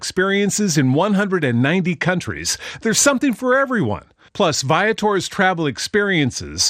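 A short speech recording with a dull, band-limited sound and a gurgling, granular edge throughout. This is most likely MP2 compression. Layer II divides the spectrum into 32 sub-bands and shares out a limited bit budget. Here the upper bands drop in and out and the surviving ones are coarsely quantised, and the damage is plainly audible, which fits a low bitrate around 80 kbps. From 3.52 s to 3.64 s there is a burst of DAB burbling, a brief disturbance laid over the speech. Corrupted bits have slipped past error correction into the MP2 stream, so wrong samples put short blips of noise into individual sub-bands, and wrong scale factors, where they get through, make sub-bands jump in level for up to a frame. The length of the burst points to about six hit frames, consistent with a bit error rate of roughly a tenth of a percent.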